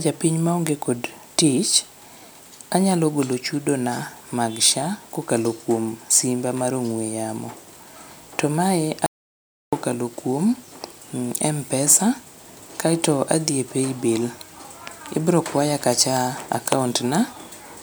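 An audio dropout to silence runs from 9.06 to 9.73 s, cutting the speech off mid-flow and bringing it back just as abruptly about 0.66 s later. The gap is silent, with no room tone or background hiss underneath, which points to the input signal being lost while the recorder kept writing silence, likely from a momentary disconnection or link failure. Whatever was spoken during that stretch is simply missing.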